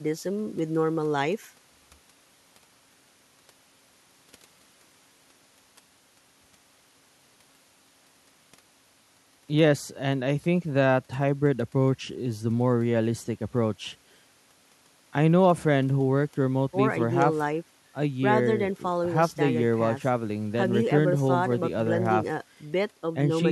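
No technical faults can be heard anywhere in this speech recording.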